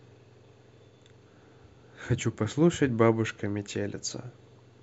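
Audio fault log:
No faults heard anywhere in this speech clip.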